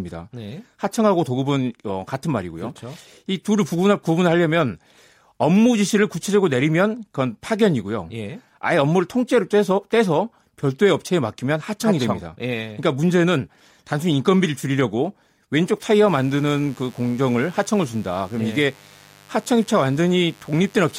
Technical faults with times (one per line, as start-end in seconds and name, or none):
16.08-20.99 mains buzz